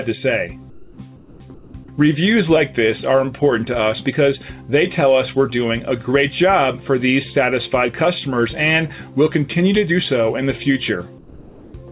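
Discontinuous transmission during quiet stretches is the likely cause of four patches of comfort noise in place of the background: the sender stops sending, and the receiver fills the gap with synthetic noise. At 0.70–0.98 s, 1.16–1.40 s, 1.54–1.74 s and 11.18–11.74 s, the background turns flat and featureless, dropping about 8, 7, 4 and 5 dB respectively. Throughout, nothing sounds above 4 kHz, which points to a narrowband telephone codec.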